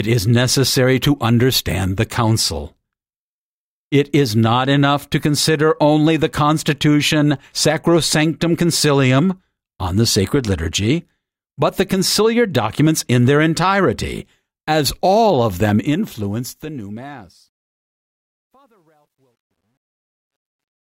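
From 15.64 s to the end, truncation distortion on a fade: an undithered 11-bit stage stair-steps the speech, turning gritty, worst after 17.77 s.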